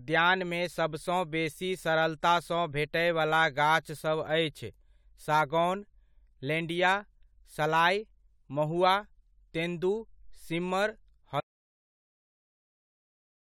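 At 11.40 s the speech cuts off abruptly and never returns. An audio dropout to silence runs from there to the end, about 2.2 s. The gap holds silence, with no room tone. The input was likely lost while the recorder kept writing silence.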